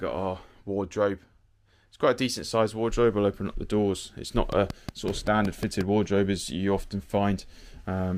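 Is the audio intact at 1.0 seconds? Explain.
Yes, the audio is intact at 1.0 seconds, with no dropout, glitch or other fault at that moment.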